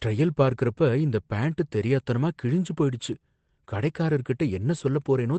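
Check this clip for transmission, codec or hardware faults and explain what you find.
I find no faults to explain in this clip.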